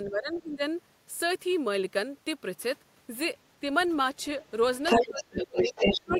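Speech suppressed in double talk at 0.05–0.63 s, 4.94–5.74 s and 5.94 s to the end: the talker's speech dips by roughly 15–20 dB, likely because the echo canceller, facing simultaneous talk from both ends, turned everything down. The other side's voice is leaking through as a faint scrap at 0.33–0.41 s and as a strong intrusion from 4.85 s onward, sometimes louder than the talker, likely from loudspeaker echo left in the microphone signal.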